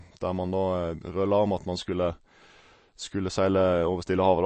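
Throughout the speech, nothing is present above 8.3 kHz, and weak detail flickers in and out with a watery, swirly texture and smeared onsets, plainly audible. This is likely MP3 compression starved of bits, pointing to roughly 36 kbps, with the encoder discarding treble.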